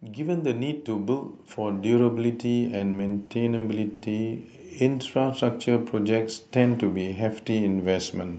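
From 0.06 to 5.55 s, an automatic gain rising fault occurs: the gain control judged the input too quiet and kept raising its gain, by about 12 dB in total. Speech and background noise swell together, gradually, rather than the speech alone getting louder.

Between 2.77 and 4.04 s, packets arrived late or too slowly, and the jitter buffer ran dry six times, producing repeated stalls (stutter). Each time the receiver stretched the last sound to cover the wait, about 230 ms in all, with the longest gap 90 ms. Nothing is lost, but the speech drags and stutters.

From 4.83 to 5.21 s, a jitter buffer slow-down occurs: the buffer was building up its reserve by repeating single pitch periods, adding 41 ms. Playback drops to 92% speed at unchanged pitch, so sounds are drawn out.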